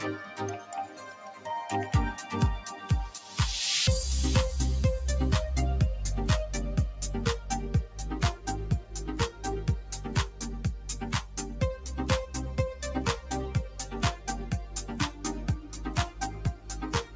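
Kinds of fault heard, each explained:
Noise suppressor applied to music or sounds: a speech-oriented suppressor stayed active on this non-speech audio, treating sustained tones, ambience and decays as noise. Its gain swings by roughly 10 dB throughout, so held material pumps and thins while transients pass largely intact.
Sound cut by the noise suppressor: at 0.87–1.45, 9.83–10.05, 11.22–11.37, 13.68–13.93, 14.13–14.28, 15.64–15.82 and 16.29–16.70 s, the suppressor pulls specific sounds down by about 4 to 7 dB, sinking sustained parts and shortening their tails.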